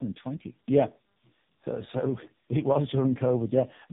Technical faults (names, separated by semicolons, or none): tandem speech coding